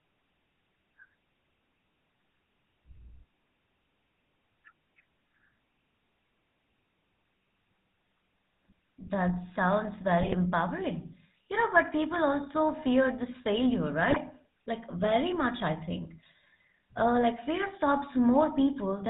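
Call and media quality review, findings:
GSM full-rate codec, throughout: buzzy, gravelly speech, band-limited to 4 kHz. Regular-pulse excitation through a vocal-tract filter. Texture consistent with 13 kbps full rate.

GSM bit errors, 10.20–10.35 s and 14.10–14.17 s: squawk and gargle bursts. Corrupted filter, pitch and gain parameters distort spectrum and level per frame. Fits a weak radio link.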